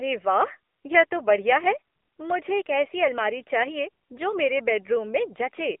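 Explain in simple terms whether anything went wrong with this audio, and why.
Yes, something's off, and it runs the whole way through: this speech has gone through the AMR narrowband mobile codec, the old 2G/3G phone codec. It throws away everything above about 3.5 kHz and the deep lows below roughly 250 Hz, so the voice sounds thin and boxed in. It also rebuilds the speech from a simple vocal-tract model in short chunks, and here that leaves a clearly audible processed, synthetic edge.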